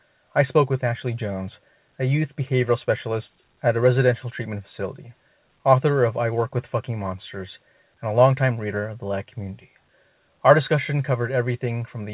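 No technical faults occur at any point in the speech, which comes over a call path whose bandwidth stops at 4 kHz, as expected for a narrowband telephone codec.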